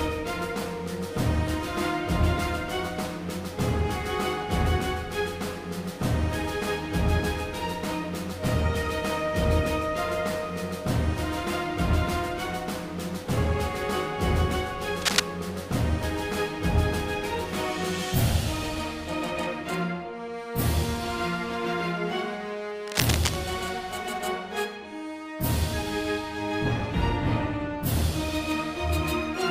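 From 15.02 to 15.20 s, and again from 22.87 to 23.36 s, cable scratch noise appears. The likely cause is a worn cable or connector being moved. It is a dense, uneven rustle, louder than the sound at first and then about level with it, unlike the single sharp ticks of isolated clicks.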